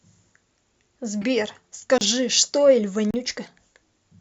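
A speech recording with two kinds of fault. The first is a corrupt frame decoded. At 1.22 to 1.27 s, a brief squeak appears where what sounds like a single damaged frame was played without being caught. Its error reaches about -20 dBFS. A second burst at 3.45 to 3.48 s is much quieter, around -35 dBFS, and suggests several frames hit. In both cases flipped bits made the decoder misread gains or codes. Energy landed at the wrong frequencies for the frame's duration. The second fault is a block of digital silence. The audio drops abruptly to silence at 1.98 to 2.01 s, a 30 ms hole. It happens again at 3.11 to 3.14 s, about 34 ms. Each gap starts and ends with no fade. The likely cause is output buffers not being filled in time, leaving zeros in their place.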